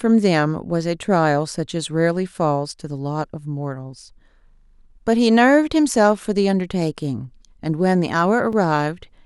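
At 8.53 s the speech drops out for about 5 ms in a block of digital silence. For that instant the output holds nothing but zeros, most likely because the buffer was not filled in time, and the signal stops and restarts with no fade. At this length the hole itself is too short to hear as a gap, so it comes across as a tick or dip. What separates it from an ordinary click is the brief silence between its two edges.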